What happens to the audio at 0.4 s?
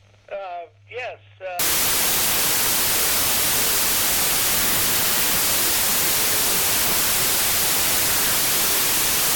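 Nothing goes wrong at 0.4 s; the audio there is intact, with no dropout, click, glitch or other fault to be heard at that point.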